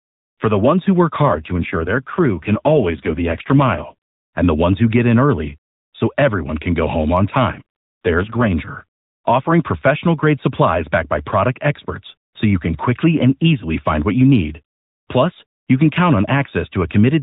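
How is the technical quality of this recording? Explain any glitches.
The speech is carried over a narrowband mobile channel whose rate sags twice. The underlying AMR narrowband codec sounds like its full 12.2 kbps mode, with nothing above 4 kHz and only light coding roughness.

AMR rate drop, 1.22 to 3.95 s and 7.52 to 8.52 s: a weak radio link forces the codec down, which fits 5.9 kbps, so fewer pulses model each frame and the speech turns buzzy and synthetic. Unlike a dropout or bandwidth switch, the band stays put and nothing goes silent.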